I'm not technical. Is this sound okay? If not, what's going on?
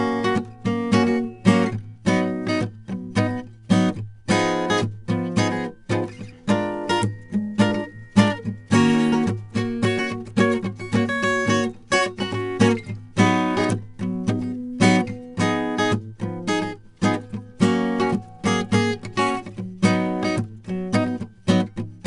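No. The music has been stored with 4-bit ADPCM compression, a cheap scheme that saves each moment of sound as a small step up or down from a guess. Those coarse steps leave a gritty hiss that rises and falls with the music, plainly audible from start to finish, and sharp attacks come out rough. Nothing reaches above about 10.6 kHz either, which fits a low sample rate and makes the whole clip sound dull.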